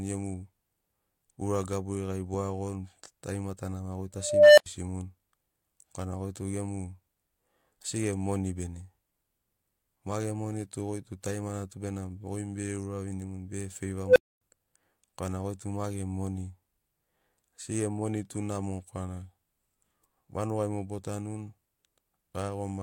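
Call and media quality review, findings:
Unstable filter, 4.16–4.66 s: tone near 700 Hz swells over 414 ms, clips, then 85 ms of silence as output overflows. Recursive filter in the speech processing chain with bad coefficients; feedback grows unbounded until reset.

Unstable filter, 14.05–14.41 s: faster runaway, tone near 500 Hz peaking within 105 ms, clipping, then 256 ms dropout. Recursive stage diverging again, overflow muting output until the filter state clears.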